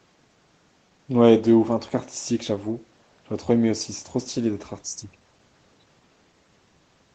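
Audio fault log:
No faults detected.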